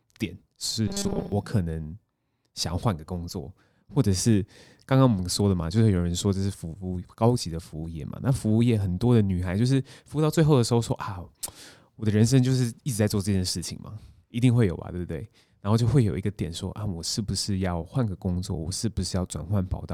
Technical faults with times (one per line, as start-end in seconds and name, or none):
0.88-1.32 robotic sound from repeated short buffers